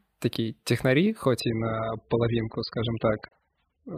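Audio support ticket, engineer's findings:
Adaptive stream at a lower bitrate, 1.40 s to end, right after "такие технари". Abrupt switch with no gap: nothing above 5.1 kHz, speech turns smeared. Fits a step down from 96 to 8 kbit/s AAC after the connection slowed. Unlike an underrun, audio never stops.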